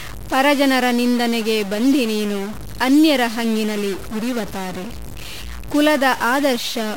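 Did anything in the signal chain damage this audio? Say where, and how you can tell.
Yes. A stuck bit runs through the whole speech clip, most likely a data line or converter holding one bit fixed. Every value that should flip that bit is pushed off by a fixed step of about -25 dBFS, so the speech carries a harsh, buzzy distortion and the pauses fill with noise instead of falling silent. On a waveform the quiet gaps show a raised, jagged floor. On a spectrogram there is broadband hash across the whole file.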